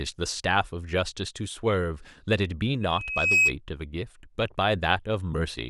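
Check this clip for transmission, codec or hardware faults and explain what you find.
A loudspeaker feedback squeal runs from 2.81 to 3.57 s. The microphone picked up the loudspeaker it was feeding, and at 2.6 kHz the loop gain exceeded one. That single tone swells over roughly half a second into a piercing whistle about 10 dB above the speech.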